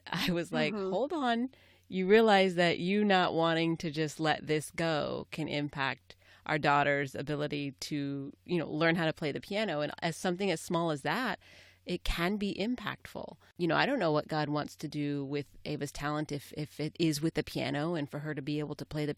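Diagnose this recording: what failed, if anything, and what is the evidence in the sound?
Nothing failed, and the sound of this speech recording gives no evidence of a fault at any stage.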